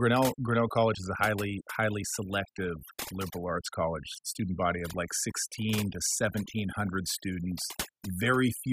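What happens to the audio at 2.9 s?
At 2.9 s the speech shows overdone noise removal, present throughout the clip: over-aggressive noise reduction gates quiet frequency bands, leaving twinkling specks over near silence.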